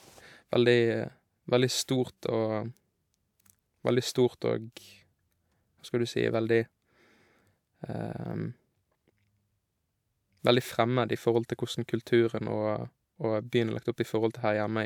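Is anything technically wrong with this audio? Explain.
No, nothing technically wrong can be heard in this speech recording.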